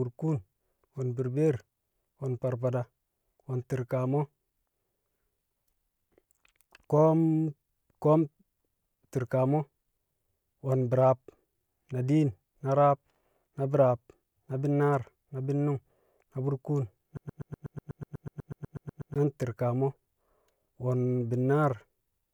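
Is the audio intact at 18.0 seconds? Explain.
No, a broken-record loop runs from 17.17 to 19.16 s, just after "bi̱nnu̱ng na burkuun na". A fragment of about 123 ms repeats exactly, back to back, 16 times, giving a rapid mechanical stutter instead of continuing speech. The likely cause is a stall in the player, encoder or stream, which kept resending the last piece of audio it held. Whatever speech belonged in those two seconds is lost, not delayed.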